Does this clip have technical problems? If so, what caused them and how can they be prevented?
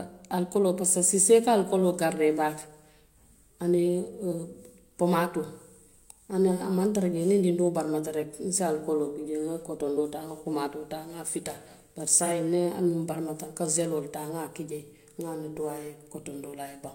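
Yes. AAC frame loss with concealment occurs from 12.19 to 12.32 s, just after "fita bari". About 43 ms of coded audio went missing, which fits a single lost AAC frame. The decoder covered the gap by reusing the last good spectrum with altered signs and estimated energy, so the sound there turns briefly smeared or noisy rather than dropping out. Prevention: send the stream over a reliable transport or add forward error correction so that frames reach the decoder intact.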